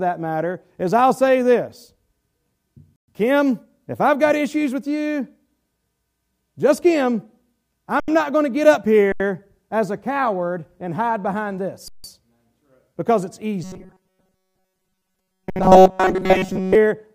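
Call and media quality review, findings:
Underrun with held sample. Sound freezes flat, then resumes where it stopped, no hard click. 2.96–3.08 s (120 ms), 8.00–8.08 s, 9.12–9.20 s after "going to get up", 11.88–12.04 s after "coward and hide behind" (160 ms), 15.50–15.56 s. Output buffer starved; converter holds last value.

Robotic sound from repeated short buffers. Rigid metallic buzz at 188 Hz, 13.64–16.75 s, starting after "because it's". Most of the stretch is repeated audio. Likely cause: late delivery, with the last chunk looped to fill. The period fits a buffer of about 5.3 ms.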